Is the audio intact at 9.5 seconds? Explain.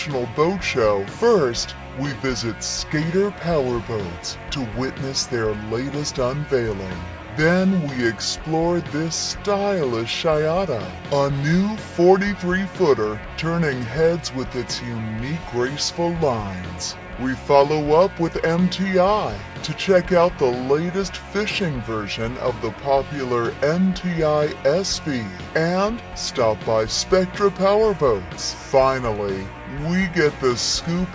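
No. At 9.5 seconds, as throughout the clip, the sound is slowed to about 0.73 of its proper speed and sits about 5.5 semitones lower, with pitch and tempo dragged down together. This is a wrong sample rate fault: the samples are played back more slowly than they were captured, with no conversion in between. The ratio fits material recorded at 22 kHz being played at 16 kHz.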